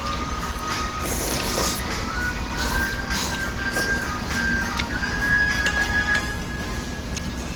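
Low-bitrate Opus compression in hybrid mode, likely around 16 kbps, runs short of bits throughout, leaving the sound plainly muffled, hoarse, rough and grainy.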